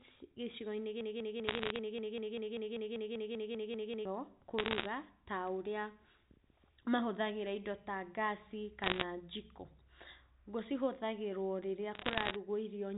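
From 1.01 to 4.05 s, a broken-record loop: the player or stream likely stalled and kept resending its last 0.20 s fragment, so that piece repeats back to back about 16 times and the audio meant for those three seconds is lost. Bit errors on a digital phone line, flipped bits in the G.711 samples carried over the 4 kHz telephone band, add sharp ticks and crackle at 1.44 to 1.78 s (inside the loop), 4.59 to 4.86 s, 8.84 to 9.03 s and 11.95 to 12.36 s. The error rate is around one percent, heaviest near 9 s.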